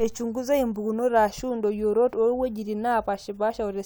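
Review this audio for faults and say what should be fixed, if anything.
Nothing to fix: no faults are audible anywhere in the speech.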